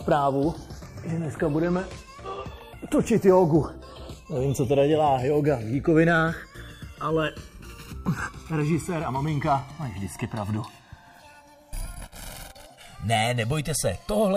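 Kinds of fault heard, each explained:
Channels drifting apart: The two channels run on separate clocks, off by roughly 150 parts per million. The delay between them slowly grows, reaching around one and a half milliseconds. Summed to mono, comb notches sweep through the spectrum, heard as slow flanging throughout.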